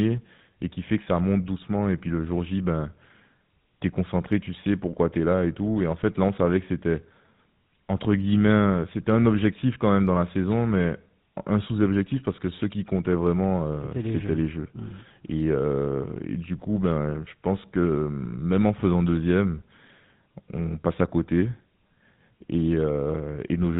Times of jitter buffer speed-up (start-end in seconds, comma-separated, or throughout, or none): none